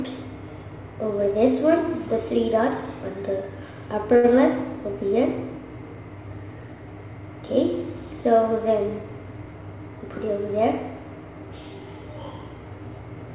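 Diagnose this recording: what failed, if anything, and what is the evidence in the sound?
What failed is a short stall from a late packet, at the network and jitter-buffer stage. Around 4.16 to 4.27 s the sound hangs on itself for about 75 ms, a held smear, and then picks up exactly where it left off, with nothing skipped. A packet showed up late, the buffer ran dry, and the receiver stretched the last bit of audio to fill the gap, adding 75 ms of delay. The band-limited sound, with nothing above 4 kHz, fits a G.711 mu-law call path.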